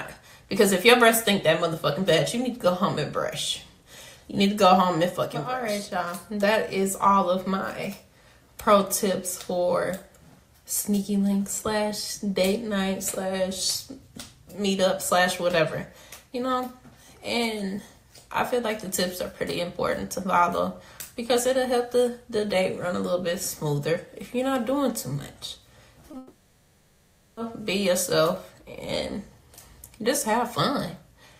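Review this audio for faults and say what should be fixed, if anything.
At 26.11 to 26.15 s there is a short concealed packet loss. About 20 ms of audio arrived too late, and the receiver filled the gap by extending the preceding sound before blending back in, leaving a brief smear. Unlike a dropout, it passes almost instantly. A larger jitter buffer would give late packets time to arrive.

From 26.17 to 27.39 s comes a long network dropout. For about 1.2 s the sound is replaced by a continuation of what came before, decaying into buzz and hiss with no true silence, and the audio resumes further on with that stretch gone. The length is what separates it from the short loss above, and the likely cause is a stall on the network path. Forward error correction and a steadier connection would reduce such gaps.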